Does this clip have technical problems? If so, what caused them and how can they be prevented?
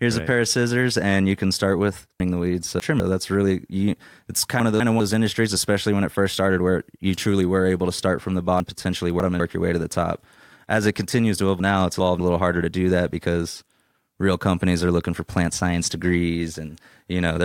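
Yes. Chunks out of order jumble the speech at 2.2–3.0 s (after "you can start with"), 4.6–5.0 s, 8.6–9.4 s and 11.6–12.2 s. A 200 ms chunk arrives late and plays after the chunks meant to follow it. Each event leaves three hard joins. Buffer and reorder chunks by sequence number before playback.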